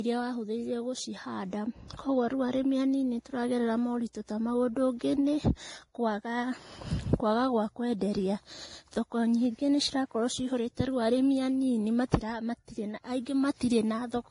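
The whole clip carries layered lossy artefacts: nothing above about 10.6 kHz, with the different codec artefacts heard together on the speech. That mix points to transcoding between lossy codecs, likely a low-rate Vorbis pass followed by roughly 48 kbit/s MP3, each adding its own damage.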